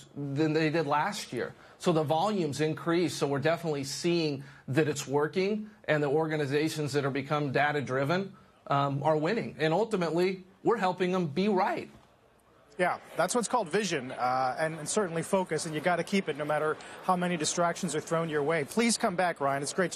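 A single sharp click at 3.27 s is most likely dropped samples: around one sample is missing, so the waveform jumps straight to a later value. Unlike a dropout, nothing audibly goes silent. The loss is far too brief to remove sound, leaving only a thin vertical line across the spectrum.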